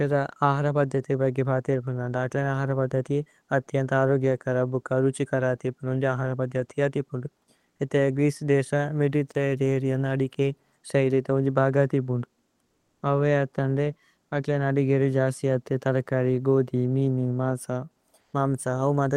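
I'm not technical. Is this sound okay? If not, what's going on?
No. Twice, from 12.64 to 13.02 s and from 18.20 to 18.33 s, the real room sound in a pause turns into a smooth, even hiss: comfort noise in place of the background, likely from the call app pausing transmission during silence. Unlike a dropout, the gap is never dead silent.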